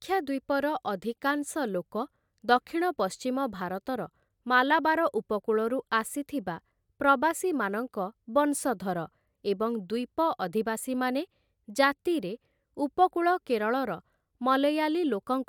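Nothing stood out on listening to this speech recording.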